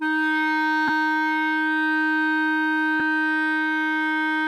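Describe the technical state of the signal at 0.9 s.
Lost LE Audio frames occur from 0.88 to 0.90 s in this music, a gap of about 15 ms, consistent with two dropped frames. The LC3 decoder filled the hole by repeating the last spectrum with randomised signs, so tones briefly blur into a noisy smear.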